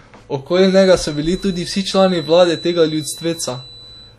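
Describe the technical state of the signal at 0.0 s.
At 0.0 s the speech has likely passed through WMA compression, a transform codec whose quantisation noise smears across long blocks, which fits a bitrate near 48 kbps. The damage is plainly audible from the first moment and lasts throughout, a ringing, washy quality with hiss that breathes with the signal.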